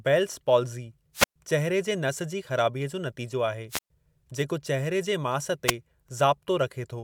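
Wireless microphone squelch dropouts interrupt this speech at 1.14–1.36 s and 3.70–3.90 s, each muting for about 120 ms, and briefly at 5.67–5.73 s with almost no mute. A fading FM radio link lets hiss rise until the receiver's squelch cuts the output.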